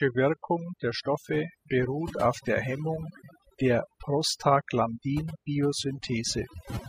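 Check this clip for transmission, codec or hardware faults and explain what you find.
Throughout the speech, the background drops to near silence sprinkled with twinkling specks. This is overdone noise removal: an overly aggressive noise reducer strips individual frequency bands near its noise estimate, taking quiet speech detail with them.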